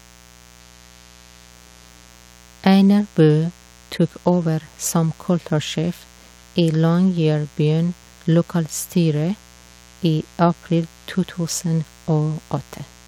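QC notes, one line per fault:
Throughout, mains buzz: a steady, raspy 60 Hz buzz sits roughly 30 dB under the speech. Sharp switching spikes enter twice per mains cycle, so harmonics of 60 Hz stack up into the kilohertz range, which gives it a rasp rather than a pure hum.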